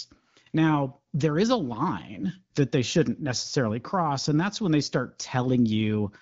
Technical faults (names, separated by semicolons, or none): none